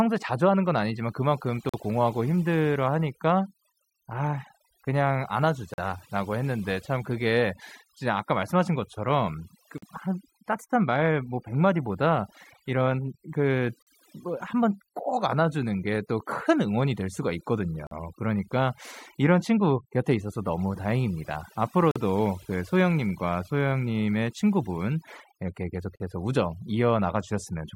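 Overdone noise removal runs throughout. Bands near the noise estimate are cut too hard. Quiet background sparkles with specks.

Gaps between chunks fall at 1.69, 5.74, 9.78, 13.82, 17.87, 21.91 and 25.96 s. Each is a 44 ms hole, repeating every 4 s at the chunk joins.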